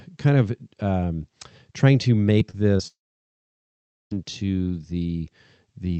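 Just after "of um trying to", at 2.39 to 2.43 s, the speech smears briefly. This is short concealed packet loss: about 20 ms of audio arrived too late to decode, and the receiver filled the gap by extending the preceding sound before rejoining the real signal. The same thing happens at 2.51 to 2.55 s and again at 2.77 to 2.81 s. Each is heard as a short smear or wobble, and a brief consonant can lose its edge.

From 2.87 s the audio breaks off until 4.13 s, which points to a long network dropout as the likely cause. About 1.24 s of speech never arrived. The receiver first carries the last sound forward as a brief fading buzz, then leaves roughly 1.16 s of silence. Speech resumes at 4.13 s with the missing portion simply gone. Throughout the clip the call codec's upper band stops at 8 kHz.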